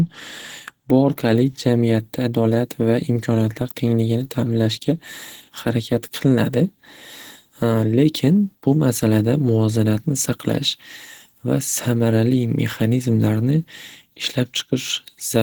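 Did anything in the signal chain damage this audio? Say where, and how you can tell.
Yes. The damage sits at the codec stage and runs through the whole speech clip. The speech has a hoarse, grainy texture with a noise-filled quality in the upper bands rather than holes or swirling, and content extends to about 20 kHz, so the bandwidth hasn't collapsed. That pattern likely points to Opus compression in its hybrid mode at a low bitrate, around 16 kbps, where the upper bands are filled with noise and lower-band detail is coarsely coded.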